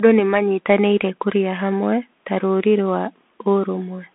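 Throughout, the speech sounds thin and scratchy over a granular hiss, with nothing above 3.8 kHz: the Bluetooth CVSD headset codec, a one-bit delta coder consistent with 64 kbps, plainly damaging it.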